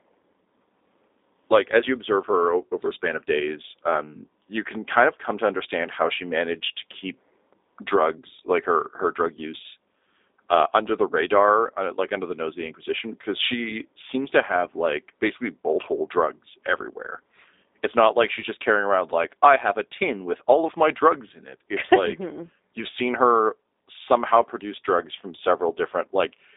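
Speech runs through the G.729 codec for its whole length, and the damage is plainly audible. Nothing passes above 3.8 kHz. The rough, synthetic texture fits an 8 kbit/s stream.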